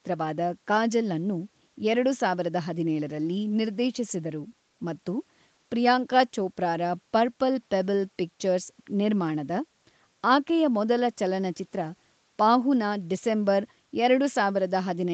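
Nothing is technically wrong with this speech clip; its top end stops near 8 kHz, as expected from an ordinary call path.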